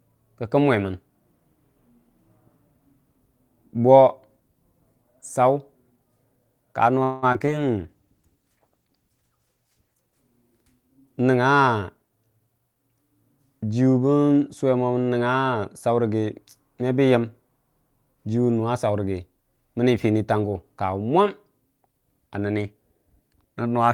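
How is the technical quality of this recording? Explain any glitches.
The recording has three distinct call-path glitches packed into the middle of the clip, between roughly 7 and 13 seconds.

From 7.03 to 7.49 s there is repeated packet loss, producing a robotic sound. Four holes open in quick succession, the longest 191 ms, and about half the span is patched by stretching the last received sound. The result is choppy and robotic. A spectrogram shows smeared, repetitive harmonic bands with brief blank notches.

From 7.81 to 10.75 s a call bitrate drop makes the speech rough and watery. It points to the encoder falling from about 32 kbps to near 14 kbps, bottoming out for about 2.1 s. Above the normal 12 kHz ceiling nothing changes. Below it, the spectrogram's upper region thins and turns blotchy as the coder quantizes coarsely.

From 11.53 to 12.98 s a jitter buffer speed-up makes the speech sound hurried while the pitch stays the same. 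The receiver trimmed short pitch-period pieces, around 150 ms in total, to shed excess buffered delay, so playback runs at about 111% speed. On a waveform, syllables sit slightly closer together, with tiny splice points between cycles.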